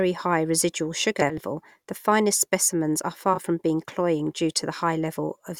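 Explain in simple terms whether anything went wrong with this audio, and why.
Two spots have frames out of order: neighbouring chunks of the speech arrived swapped and were played that way. From 1.21 to 1.40 s, two chunks of about 80 ms trade places, giving a garbled flutter; 3.34 to 3.38 s repeats this with 20 ms chunks.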